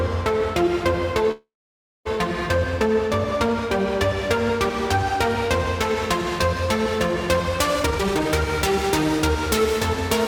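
A call audio freeze runs from 1.31 to 2.07 s. The sound stops moving forward, and the last moment is stretched into a brief fading buzz before about 570 ms of silence takes over. The likely cause is packets held up in transit until the jitter buffer ran dry. When they arrive, playback resumes from the point where it stopped. Roughly 740 ms of filler has been inserted, nothing is lost, and everything after it plays that much later.

A jitter buffer speed-up follows from 7.80 to 8.29 s. The audio plays at about 196 % of normal speed while keeping its pitch, so this stretch sounds rushed and crowded together. The receiver had built up more audio than it wanted to hold and was cutting the excess delay. It did this by snipping out short pitch-period-sized pieces in quick succession, removing around half a second of material in under half a second of playback.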